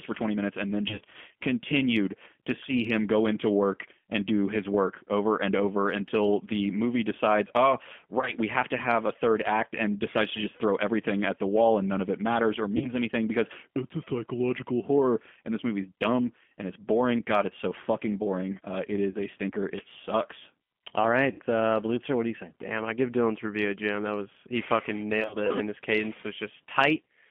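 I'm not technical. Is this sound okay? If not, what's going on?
No. The speech sounds thin, slightly rough and synthetic throughout, like an old phone line. That is the G.729 codec, a low-data phone codec that keeps only the middle of the sound, roughly 200 Hz to 3.4 kHz, and rebuilds the voice from a simplified model.

There are also six brief buzzy or smeared moments, where the voice turns into a fading tone before recovering. These are VoIP packet loss concealed by the speech codec: small chunks of audio went missing in transit, and the decoder stretched the last sound it had to fill each gap. They occur at 0.89 to 1.01 s (after "minutes and then", before "continued to see him"), 8.19 to 8.32 s, 12.77 to 12.92 s (between "of it matters or" and "anything because it's a"), 19.11 to 19.17 s (just before "a stinker"), 21.32 to 21.41 s, and 25.21 to 25.36 s. Each gap lasts about 30 to 70 ms.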